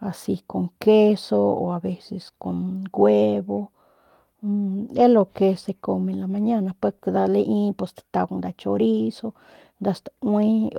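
At 4.87 s, running to about 5.01 s, there's a lost packet rebuilt from error correction. The speech never drops out, but roughly 80 ms turns coarse and noisy, which points to four packets lost and replaced by the low-bitrate backup copies carried in the packets that followed.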